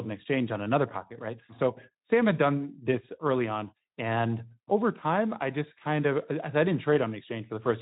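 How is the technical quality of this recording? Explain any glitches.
No faults can be heard in this speech recording; it carries only the light coding colouring of a Speex voice codec, which fits a stream of around 15 kbps.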